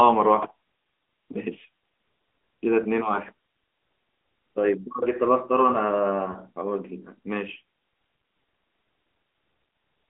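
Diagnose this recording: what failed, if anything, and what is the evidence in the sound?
The codec stage shows AMR narrowband mobile codec coding throughout. The speech sits in a band of about 250 Hz to 3.5 kHz with nothing above it, and it has a plainly buzzy, synthetic edge that fits a mode near 10.2 kbps. A plain low-pass filter would dull the sound without roughening it.

At the network stage, lost AMR speech frames cause brief dips and warbles at 1.32–1.36 s and 6.32–6.37 s, each fitting a single 20 ms frame. The decoder repeated its last pitch and vocal-tract settings at falling gain, so there is no click or hard dropout to silence.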